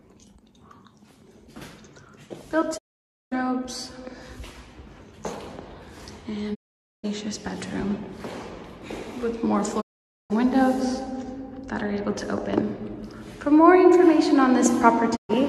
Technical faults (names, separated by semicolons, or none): digital broadcast dropout